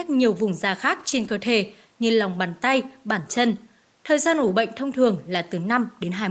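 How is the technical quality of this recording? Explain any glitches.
The recording has three short stretches of lost packets rebuilt from error correction, at 0.99 to 1.33 s, 2.33 to 2.35 s and 4.43 to 4.49 s. Packets were dropped in transit, but each following packet carried a low-bitrate backup copy, which the decoder played in their place. There is no silence, just a brief roughening with added grainy noise. The first, longest stretch lasts about a third of a second and covers nine separate lost packets. The audio is band-limited to 8 kHz by the call codec path.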